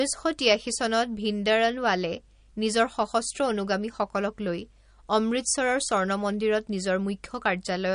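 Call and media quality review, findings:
Throughout the speech. Hard treble ceiling, nothing above 10.1 kHz. Watery, swirly texture. Metallic chirps on s sounds. Attacks smeared. Damage plainly audible. Probable component: likely MP3 compression, the sound pointing to a low bitrate near 42 kbps. Mechanism: encoder short of bits. It cuts the top band at a fixed frequency. It zeroes weak frequency lines, which flicker on and off frame to frame.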